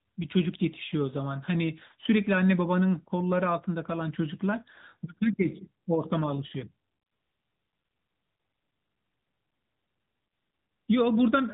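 Throughout, the speech sounds muffled and plainly buzzy and synthetic, with nothing above 3.8 kHz: AMR narrowband mobile codec damage, consistent with AMR-NB at around 10.2 kbps.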